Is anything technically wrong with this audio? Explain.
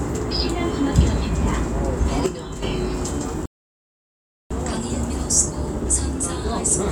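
Yes, there are two faults.

From 2.26 to 2.62 s the sound and its background drop together by about 9 dB at once, then return: a sudden gain jump, likely a digital gain change applied without any ramp.

From 3.46 to 4.51 s the sound cuts to silence for about 1.05 s, then resumes. This is a playback stall, likely the player starving for data or its thread blocking.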